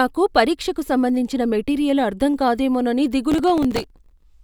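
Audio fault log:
3.32–4.23 s, processor overload crackle: dozens of very short buffers, around 1.5 ms each, miss their deadlines in a row, and each slot replays stale audio with hard edges. Unlike a single dropout or clipping, this is a dense gritty tearing riding over the speech that stops once the load passes.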